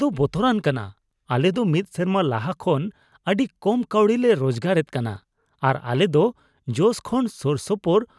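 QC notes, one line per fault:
Nothing stood out on listening to the speech here; no line needed a flag.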